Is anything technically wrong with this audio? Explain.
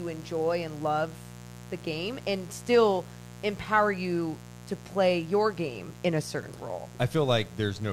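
Yes. A mains buzz runs through the whole speech clip. It sits roughly 20 dB below the speech. Switching spikes at twice the 60 Hz mains rate leak in, with harmonics reaching several kHz. The result is a steady, raspy buzz under everything.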